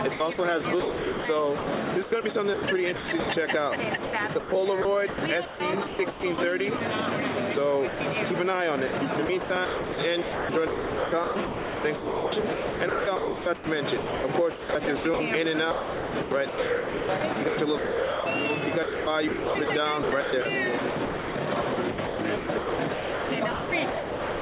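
From 0.14 to 3.29 s, and again from 4.04 to 6.8 s, the sound is chopped by the voice detector, likely because the sender's detector kept switching transmission off and on. About 1.08 s and 0.78 s respectively are replaced by comfort noise. On a waveform, the sound's envelope breaks into flat, low-level strips. On a spectrogram, the detailed energy gives way to a smooth, uniform noise floor.

From 7.88 to 8.0 s, the sound is dropped by the voice detector, likely because the detector judged it to be background and stopped sending. The whole 120 ms becomes steady comfort noise. It shows as a short, even band on the spectrogram and a flat sliver in the waveform before the sound resumes.

The chopping returns from 8.87 to 15.2 s (about 3.69 s replaced), 15.71 to 18.26 s (1.74 s), and 18.83 s to the end (2.83 s). This is likely the same detector cutting in and out repeatedly. Throughout, energy sits beneath a ceiling at 4 kHz, which fits the G.711 call path.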